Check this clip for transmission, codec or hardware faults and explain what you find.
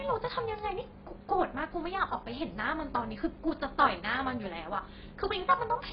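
Two problems run through the whole recording.

First, the speech is dull and smeared, and sibilants have a fizzy, warbly texture. That's likely heavy AAC compression: at a bitrate that sounds like around 16 kbps, the encoder drops the top end and coarsely quantises what's left.

Second, there's overlap-add ripple, heard as a metallic buzz with extra tones around each note. The frames were reassembled with an overlap that doesn't sum evenly, so the level dips by about 11 dB once per frame, a few hundred times a second.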